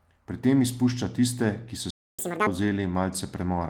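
A short speech recording has a playback stall from 1.90 to 2.19 s, about 0.28 s of silence, likely from the player running dry of data. Catch-up at higher speed follows from 2.19 to 2.47 s: the audio runs at double speed, raising pitch by roughly ten semitones, then drops back, unlike a steady pitch shift.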